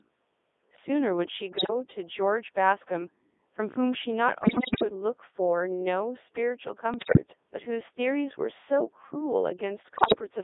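Speech passed through the Codec 2 vocoder, which rebuilds it from sine waves and sounds buzzy and robotic. It runs in the 3.2 kbit/s mode over a 300 Hz to 3.6 kHz band, and a spectrogram shows nothing outside that band. Bit errors on digital voice radio break it into warbling bleeps and gibberish at 1.58–1.70 s, 4.42–4.84 s, 6.94–7.18 s and 9.94–10.21 s. There, corrupted frames appear as sudden jumps in pitch, level and spectral shape, at error rates of roughly 10%, 10%, 7% and 15% respectively.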